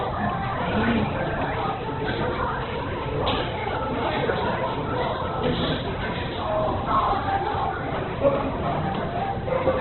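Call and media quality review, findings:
Opus compression, entire clip: audio rough and grainy, nothing above about 4.1 kHz. Likely heavy Opus encoding in CELT mode at a very low rate (fits roughly 8 kbps). Bits too scarce, so bands filled with noise and bandwidth cut to narrowband.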